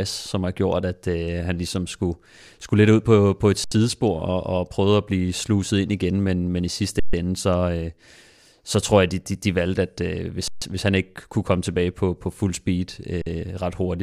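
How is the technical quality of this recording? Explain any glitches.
The speech is interrupted four times by an underrun with held sample: at 3.64–3.72 s (about 75 ms), 6.99–7.13 s and 10.48–10.62 s (about 139 ms each), and 13.22–13.26 s (about 46 ms, which fits a 2048-sample shortfall at 44.1 kHz). Each time the output buffer emptied, the converter froze on its last value, so the waveform flatlines and the sound stops with little or no click. No audio was lost, and playback resumes where it left off, making each restart soft rather than clicky.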